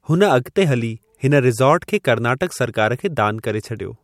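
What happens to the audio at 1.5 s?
Nothing goes wrong at 1.5 s; the speech carries on intact through that moment.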